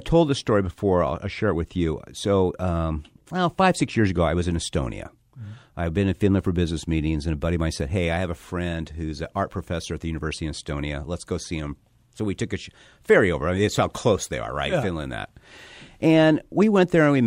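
A speech recording with nothing technically wrong with it.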